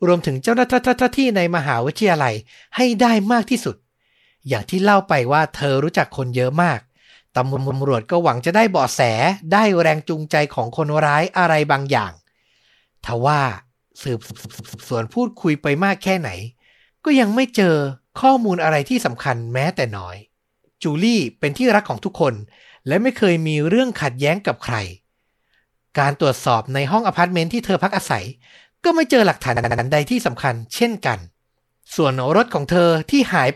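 The speech stutters from repeated frames at 0.71 s, 7.55 s, 14.29 s and 29.56 s. Short blocks of 144 ms, or 72 ms at 29.56 s, replay two to four times, adding up to 1.58 s. A spectrogram shows identical repeating patches.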